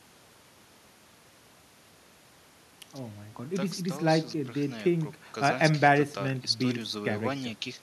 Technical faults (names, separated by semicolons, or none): none